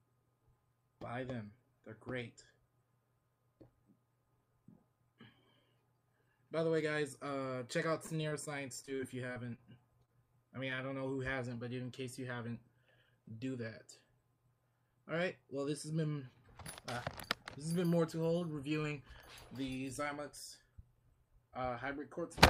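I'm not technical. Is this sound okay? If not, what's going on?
No, it has three separate glitches, all from the audio being sent over a network in small chunks.

From about 7.89 to 10.80 s you get repeated packet loss, which gives that robotic sound. Chunks of audio went missing or arrived too late 16 times in that stretch. Each time, the receiver papered over the hole by stretching out the last bit it had, about 266 ms of patching in total. Even so, roughly 160 ms of real sound is gone for good, with the longest single hole about 37 ms. That's why it comes across choppy there.

Around 18.39 to 18.43 s there's a short stall from a late packet. One chunk didn't show up on time, so the receiver held the previous sound for about 17 ms while it waited, then carried on exactly where it left off. Nothing is actually missing. You may just notice a sound hanging on a touch too long, maybe with a small buzz or dip.

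From about 20.79 to 22.19 s there's a jitter buffer speed-up. The receiver had built up more waiting audio than it likes, so to catch up it quietly snipped out lots of tiny slices, around a twentieth of a second altogether. That stretch plays at about 103% speed with the pitch unchanged. That's a small enough push that it's easy to miss, but the timing there isn't quite natural.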